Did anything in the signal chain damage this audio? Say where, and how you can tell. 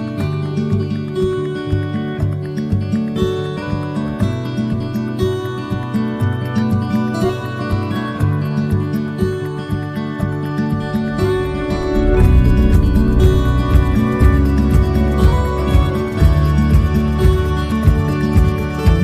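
Yes. At 17.72 s there is a single short blip, the mark of damaged data in a compressed stream at the codec stage. Corrupted bytes made the decoder misread the affected frame, lose sync and hunt for the next valid frame header before clean decoding resumed.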